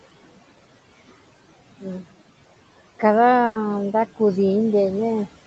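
Across the whole clip the background rises and falls with the speech: between phrases the room noise sinks away, then returns underneath each stretch of talking. These are noise suppressor artifacts. The suppressor estimates the steady room noise and pulls down each frequency band it judges to be noise, frame by frame, cutting it by about 18 dB. Because that decision keeps changing, the leftover noise pumps instead of staying even.

From 3.45 to 3.57 s the speech stops moving forward. The last sound is drawn out and fades, and then the talking picks up a little further along. That is a burst of packet loss. For about 100 ms no audio arrived in time, so the receiver filled the hole by continuing and fading the final sound it had, with no dead silence. When audio resumed, roughly 100 ms of the original speech had been skipped.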